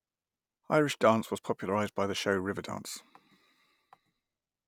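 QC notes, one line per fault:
Nothing to flag on this speech clip; it sounds fine all the way through.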